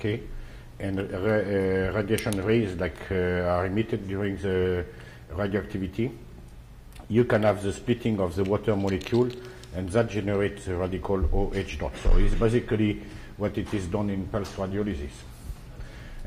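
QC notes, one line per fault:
No faults to note.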